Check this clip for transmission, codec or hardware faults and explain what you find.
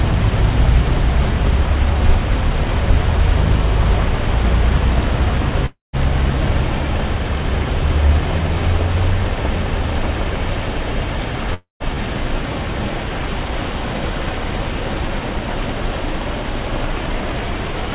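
Two gaps stand out in these everyday sounds, heard through a G.711-style call path with nothing above 4 kHz. Long network dropout at 5.66 to 5.96 s and 11.54 to 11.96 s: about 270 ms lost each time, likely dropped packets, so the last sound smears into a fading buzz, then silence.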